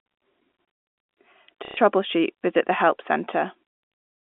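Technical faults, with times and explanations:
1.65 to 1.77 s, packet loss with last packet repeated: About 120 ms of sound goes missing. The receiver fills the gap by replaying its last good packet. The length fits four lost packets of 30 ms each. The replays seldom line up with the pitch. The repeats buzz at about 33 Hz and give a short robotic stutter. The telephone band of the G.711 line stays audible through it.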